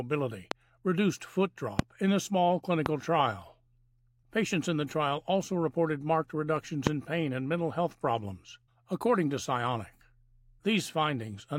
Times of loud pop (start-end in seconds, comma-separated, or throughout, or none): 0.51-0.54, 1.79-1.81, 2.86-2.88, 6.87-6.89